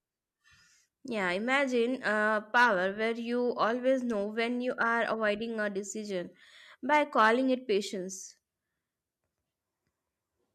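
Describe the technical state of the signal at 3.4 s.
At 3.4 s the speech signal is intact, with no dropout, clipping, distortion or other technical fault.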